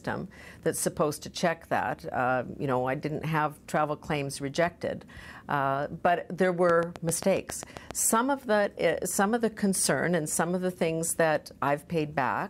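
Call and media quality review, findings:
Train of clicks, 6.70–7.92 s: likely interference or a failing interface injecting regular pulses at 7.4 per second; about ten ticks, roughly 15 dB above the sound.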